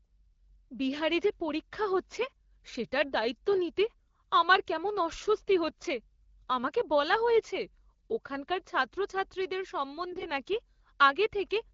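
Three short bursts of AMR bit errors roughen the speech on the AMR-WB link: at 2.13–2.25 s between "বিহারে যে পরীক্ষা" and "সেটার দায়িত্ব নিতে আমার", at 5.69–5.73 s after "নিতে আমার কেমন অস্বস্তি", and at 10.10–10.26 s after "বলা হয়েছে ওখানকার ছাত্রছাত্রীদের", the worst of the three. Each burst spans a handful of 20 ms frames. Flipped bits in the weakly protected parts of the frames misplace the excitation pulses and skew the fine pitch, gain and spectral values, so the sound turns hoarse and gargly. Unlike packet loss, level and pitch carry on with no gap or smoothed-over fill.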